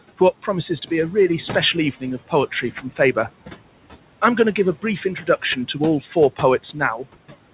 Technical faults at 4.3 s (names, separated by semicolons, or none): noise suppressor artifacts